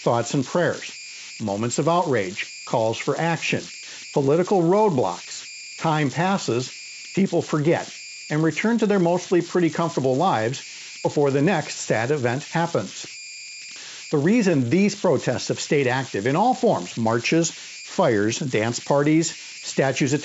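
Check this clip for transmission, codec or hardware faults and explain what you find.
Two hardware faults are present in this speech clip. The wideband coding is audible as a band limit near 7.7 kHz with light coding damage, consistent with G.722.

Converter idle tones run through the whole clip. A delta-sigma converter without dither settles into repeating bit patterns when the input is small. Here they form a tone around 2 kHz, about 14 dB below the signal. It is clearest in pauses and sounds grainy under quiet passages.

Loose connector crackle occurs from 13.04 to 13.24 s. A worn or dirty contact is making and breaking as it shifts. That chops the signal for those 0.2 seconds. The result is a short, irregular burst of scratchy crackle.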